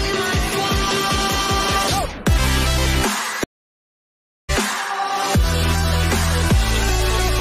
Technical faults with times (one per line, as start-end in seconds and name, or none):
3.44-4.50 stream reconnect